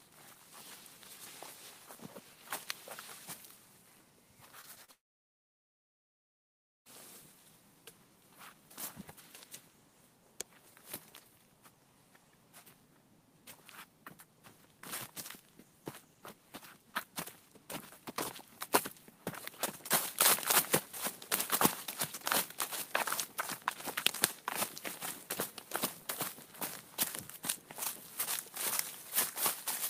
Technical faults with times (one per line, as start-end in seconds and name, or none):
4.61-4.90 short concealed packet loss
4.92-6.87 long network dropout